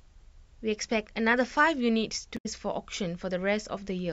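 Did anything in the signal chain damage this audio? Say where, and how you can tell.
Yes. Between 2.34 and 2.46 s, about 0.12 s of the speech breaks up. This is damaged data in a compressed stream, at the codec or storage stage. The decoder hit corrupted frames, produced garbage while it lost sync, then resynchronised at the next valid frame header. A network dropout would instead give silence or a smoothed concealment fill, not a garbled decode of corrupted frames.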